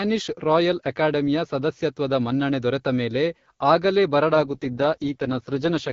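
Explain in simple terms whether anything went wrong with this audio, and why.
An AMR rate drop starts at 4.33 s and lasts to the end of the clip. The speech is carried by the HD Voice phone codec, which sounds clear up to that point. Then the mobile network, likely reacting to a weak radio signal, tells the codec to describe the voice with far fewer details so it can spend its effort protecting against transmission errors. The voice keeps the same brightness and never cuts out, but it turns rougher and more synthetic.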